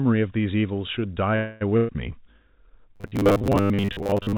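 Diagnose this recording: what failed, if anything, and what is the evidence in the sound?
Call audio freeze, 1.36 to 1.64 s, at the network and jitter-buffer stage. The speech stalls and the last sound is stretched into a buzzy, fading tail for roughly a quarter of a second, with no silence. Speech then picks up exactly where it stopped, so nothing is lost, but everything after it lands about 0.25 s later. The likely cause is packets held up in transit, which drained the jitter buffer and made the receiver improvise until they arrived.

Burst of packet loss, 1.77 to 1.92 s, also a network-stage fault. Shortly after the freeze, the sound again smears into a held, decaying buzz or hiss lasting just over a tenth of a second. This time the speech resumes further along, so about 120 ms of the original is gone. Several consecutive packets never arrived in time, and the receiver's concealment covered the hole by extending and fading the last good audio.

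Robotic sound from repeated short buffers, from 2.96 s to the end of the clip, at the driver or buffer stage. The speech turns metallic and rigid, with a steady 100 Hz buzz imposed on it while the rough shape of the speech survives. That pitch fits a 10 ms chunk being replayed over and over, and about half of what is heard is repetition rather than fresh audio. The likely cause is new audio arriving too rarely, forcing playback to loop the last buffer. The narrow G.711 mu-law call band, with nothing above 4 kHz, is audible throughout underneath these faults.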